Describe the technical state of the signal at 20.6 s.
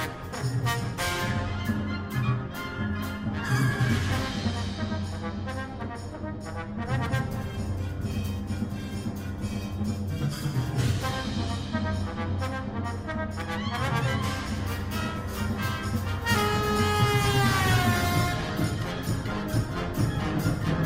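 At 20.6 s the signal is inside a stretch of adaptive stream at a lower bitrate, running from 17.62 s to the end of the clip. The player switched to a cheaper version of the stream, and the sound fits a drop from Opus at 64 kbit/s to 32 kbit/s. The change is abrupt with no gap, and codec smearing rises. On a spectrogram the upper band shows patchy, blocky energy, while the waveform continues without a break.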